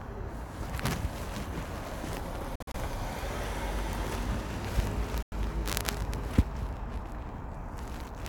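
A wireless link to the headphones likely failed to deliver audio packets in time, and in this recording of sounds those late packets were discarded, producing two Bluetooth dropouts. From 2.55 to 2.76 s about 116 ms goes missing in several short gaps, the longest 46 ms. From 5.22 to 5.33 s about 93 ms is lost. Each time the sound resumes further along, as though it had kept playing.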